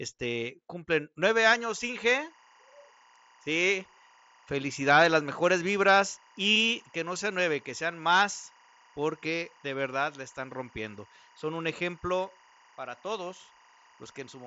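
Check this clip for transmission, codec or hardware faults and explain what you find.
One fault is present: timecode bleed runs from 1.43 s, just after "cumplen nueve", to the end of the clip. Linear timecode from an adjacent track or cable has leaked into the audio path. Its biphase square wave flips between tones near 1 kHz and 2 kHz as the bits change, so a steady chirping warble sits about 30 dB under the speech. The repeating pattern fits 23.976 fps code. The audio also stops near 7.7 kHz, consistent with a wideband mSBC headset link.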